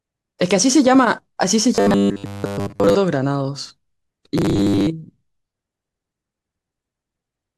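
Robotic sound from repeated short buffers hits this speech clip at 1.75 to 2.95 s and 4.38 to 4.87 s: a rigid metallic buzz near 100 Hz follows the speech loosely. It's likely a roughly 10 ms chunk being looped while most of the real audio is skipped.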